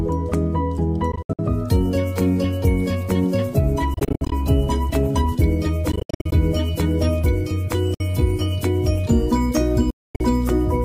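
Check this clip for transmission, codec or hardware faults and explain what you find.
Five Bluetooth dropouts break the sound, at 1.12–1.39 s, 3.94–4.32 s, 5.92–6.33 s, 7.94–8.01 s and 9.90–10.21 s. They are likely caused by packets arriving too late and being discarded. The output goes silent in clustered bursts, with the longest unbroken hole, 240 ms, near 10 s. The sound then resumes further along, as if it had played on.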